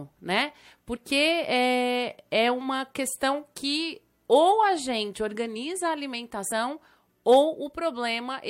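Compressed frames skipped at 0.95 to 0.98 s and again at 6.50 s in this speech clip: the audio jumps forward, losing about 50 ms at the first point and about 70 ms at the second, which fits two and three missing frames of 23.2 ms each. The decoder either never received those frames or discarded them as damaged.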